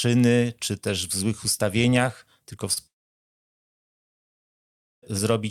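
Short concealed packet loss at 2.73 to 2.78 s, just after "w złych ustawieniach tylko": about 20 ms of audio failed to arrive in time. The receiver bridged the gap by extending the preceding sound for roughly 30 ms before rejoining the real signal, leaving a brief smear.

From 2.86 to 5.13 s the audio cuts out. The last sound trails off briefly, then about 2.1 s of silence follows before sound returns, and the lost stretch is never played. This is likely a long network dropout, with no packets reaching the receiver.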